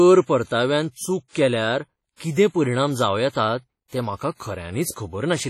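Throughout, the speech rings and sounds washy, with hiss breathing along with it and nothing above 16 kHz: likely heavy WMA compression, fitting about 32 kbps.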